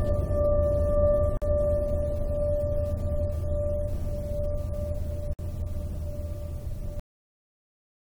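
A music clip assembled from separately encoded pieces that were joined without trimming each encoder's start-up delay and end padding, leaving a gap at a join of encoded pieces. A gap of about 46 ms opens at 1.37 s and about 56 ms at 5.33 s, with smeared edges, before the music resumes where it stopped. The final buffers were never written, producing a cut-off end: at 7.00 s the music stops mid-sound and drops straight to digital silence with no decay.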